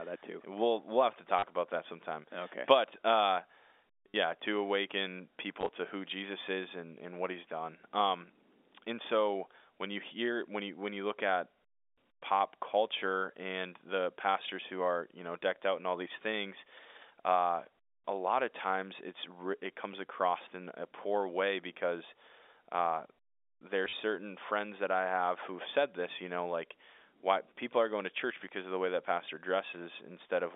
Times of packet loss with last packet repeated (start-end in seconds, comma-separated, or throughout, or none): 1.39-1.43, 4.11-4.14, 5.61-5.69, 23.85-23.93